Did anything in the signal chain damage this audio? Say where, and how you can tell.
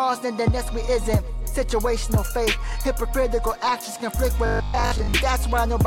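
Yes. From 4.46 to 5.14 s the sound becomes a rigid metallic buzz locked at 50 Hz: robotic sound from repeated short buffers. The likely cause is a starved driver or buffer stage looping the last 20 ms, so most of the real audio is skipped.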